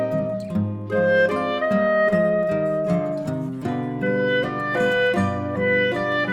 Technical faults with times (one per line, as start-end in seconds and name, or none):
none